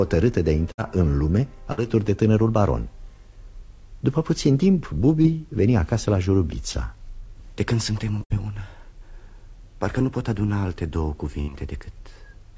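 Bursts of packet loss occur at 0.72–0.80 s and 1.72–1.83 s: roughly 60 ms of audio failed to arrive, and the receiver extended the preceding sound while fading it. The result is a brief held buzz or decaying hiss before playback jumps ahead, skipping the missing stretch.

At 5.22–5.26 s and 6.72–6.76 s there is short concealed packet loss. About 20 ms went missing each time and was patched by continuing the prior sound, then crossfading back. Each patch registers as a quick smear or wobble, and any brief transient there can drop out.

Two further bursts of packet loss follow at 8.24–8.32 s and 11.42–11.51 s, each again removing roughly 60 ms. The concealment fills the gap with a fading continuation of the last sound before the signal resumes later. Throughout, the band limit at 8 kHz is consistent with a G.722 call path.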